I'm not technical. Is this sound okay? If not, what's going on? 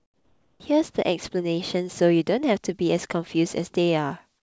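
No. There are two kinds of fault, both typical of an internet call.

Comfort noise in place of the background, from the start to 0.6 s and again from 4.38 s to the end. During these pauses the real room sound is missing. In its place is a smooth, even hiss, noticeably quieter than the true background, with none of its small details. This likely happens because the sending side stops transmitting when nobody is talking, and the receiving side fills the gap with made-up noise.

Onset clipped by the voice detector, at 0.58 s. The speech begins abruptly, with its first 20 ms missing and the comfort noise continuing into that moment. The likely cause is the sender's speech detector reacting a fraction of a second late, so the start of the sound was never sent.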